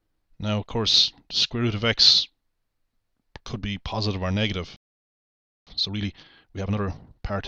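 At 4.76 s the sound stops dead for about 0.91 s, a playback stall, likely the player running out of data. From 5.67 to 7.37 s, time-compressed catch-up plays the backlog at about 1.5 times speed. Pitch stays normal, unlike a sped-up tape.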